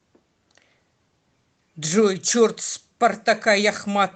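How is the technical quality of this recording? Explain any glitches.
No glitches turn up here; the speech carries only the faint softening you'd expect from Opus voice compression running in its hybrid super-wideband mode, which fits a rate of around 24 kbps.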